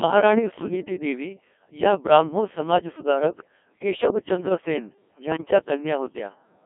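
From the start, the speech has passed through the Codec 2 vocoder, heavily degraded, at a rate that sounds consistent with about 1.6 kbit/s. The channel is confined to 250 Hz to 3.4 kHz. Only pitch, voicing, energy and a spectral envelope survive, and the decoder rebuilds the voice from sine waves, so the original waveform is gone. The result is robotic and buzzy, with a synthetic edge on every syllable.

Between 0.53 and 0.73 s, bit errors on digital voice radio corrupt the stream. That span fits roughly three frames hit at an error rate of a few percent. Because each bit steers a whole frame's pitch, level, voicing or spectrum, the voice lurches in pitch and loudness and breaks into warbling, gibberish-like bleeps. A shorter burst at 5.32 to 5.41 s, covering about two frames at a lower error rate, produces a brief similar warble.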